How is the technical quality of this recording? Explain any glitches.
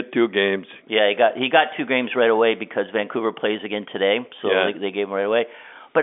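No glitches or faults here.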